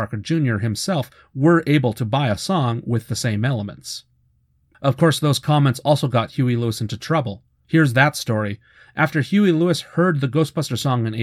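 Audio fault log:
0.34–10.84 s, clock slip clicks: faint, evenly spaced ticks roughly every 0.7 seconds, around fifteen in all, sharpest on louder speech and gone in pauses. Likely unsynchronised clocks drifting about 30 ppm apart, so single samples are dropped or repeated.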